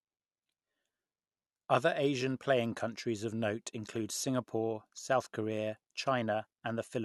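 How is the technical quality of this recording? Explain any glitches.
Nothing stood out as a technical problem on listening to this speech recording.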